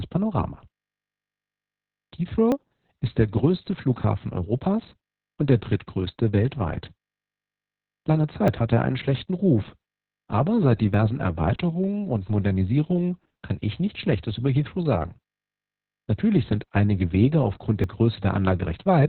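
A speech recording carries Opus voice compression at 6 kbps in SILK mode, narrowband, with 60 ms frames, and the coding damage is heavy. Narrowband Opus keeps only roughly the lowest 4 kHz, so the voice sounds muffled, hoarse and faintly robotic, with coarse, buzzy texture where the excitation is coded so sparsely. On a spectrogram the energy stops at a flat ceiling around 4 kHz, with blank space above it and smeared, blocky harmonics below. There are also four small jumps in the sound, at 2.52 s (just before "ist der größte"), 8.48 s (just before "hatte er einen schlechten"), 10.94 s (just after "aber seit") and 17.84 s. Each is likely a dropped buffer (overrun), where a piece of roughly 20 ms was overwritten before it was read and the two sides were spliced directly, with no silence. The waveform shows an abrupt discontinuity at each point.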